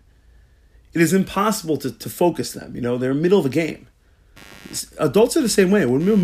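A speech clip with computer activity noise from 4.36 s to the end, right after "middle of a game": a faint buzz about 30 dB below the speech. It pulses at roughly 100 per second as load changes disturb the shared ground. A spectrogram shows evenly spaced vertical striations.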